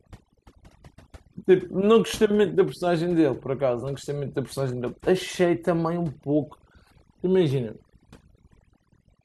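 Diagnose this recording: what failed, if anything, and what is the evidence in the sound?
The failure is overdone noise removal at the call-processing stage, and it runs through the whole speech clip. The background between phrases drops and breaks up into twinkling specks where isolated frequency bands flicker back in. The suppressor was set too aggressively for a noisy input. It pushed each band toward zero whenever that band sat close to its noise estimate. The quieter parts of the speech fell under that threshold and were removed along with the noise.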